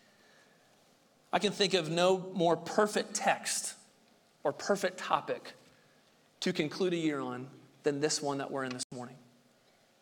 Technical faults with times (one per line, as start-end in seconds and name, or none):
8.83-8.92 corrupt frame muted